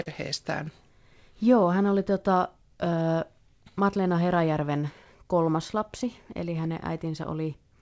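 Clock drift between sender and receiver runs through the whole recording: the sending side's clock is a few percent slow, so the receiver's jitter buffer keeps draining and must be topped up with stretched or repeated sound, leaving small, irregular timing hiccups from start to finish.

A short stall from a late packet comes first, at 0.02 to 0.08 s. A packet arrived about 40 ms behind schedule, the buffer ran dry, and the receiver held the last sound for about 40 ms before resuming. Nothing is lost, but the opening sound lingers too long.

Repeated timing corrections follow from 1.14 s to the end, with playback running at 98% speed. The receiver keeps repeating small slices, adding about 150 ms in all, always lengthening and never cutting, unevenly spaced. The result is a slightly dragging, unsteady tempo rather than obvious breaks.

Scattered short gaps overlap that stretch, from 1.6 s to 6.65 s: about ten isolated holes, none longer than about 10 ms, roughly 70 ms concealed altogether. 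Each was patched by continuing the previous sound, heard as brief ticks or smears within the otherwise continuous flow. Throughout, the call path passes nothing above 8 kHz, which fits a wideband call codec.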